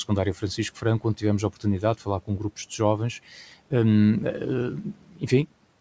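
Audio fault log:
4.83–5.23 s, speech cut by the noise suppressor: the suppressor mistakes soft speech for noise and pulls it down by about 13 dB for around 0.2 s. The speech sounds swallowed and fades along with the background, rather than breaking off abruptly into silence as in a dropout.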